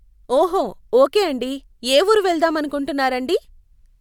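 Nothing stood out on listening to this speech recording.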